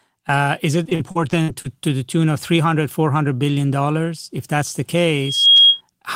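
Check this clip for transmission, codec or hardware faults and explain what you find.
Two faults are audible: a stretch of repeated packet loss and a loudspeaker feedback squeal.

From 0.83 to 1.88 s, just before "the tune of", there is repeated packet loss with a robotic sound. The speech breaks up into what sounds like seven short holes. The longest lasts about 56 ms. Together they remove about 220 ms. The receiver fills each hole by stretching the last sound it received. That covers roughly a fifth of the span. The patches sound choppy.

From 5.17 to 5.81 s, right after "that's the", a loudspeaker feedback squeal appears. A microphone is picking up the loudspeaker it feeds. At 3.3 kHz the loop gain rises above one, so that tone feeds itself. It swells over roughly a third of a second. It ends up about 10 dB above the speech. The result is a piercing, single-pitched whistle.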